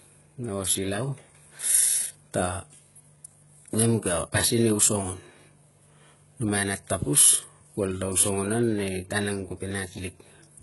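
Throughout the speech, the sibilants come out gritty and lispy, and the upper treble has a metallic, synthetic sheen whose harmonics don't line up with the body of the sound below. Nothing reaches above 11.5 kHz. The likely cause is heavy HE-AAC compression, which fits a bitrate around 12 kbps: only the lower spectrum is actually coded, and the treble is rebuilt by copying lower bands upward under a coarse envelope, so it stays bright without being the original.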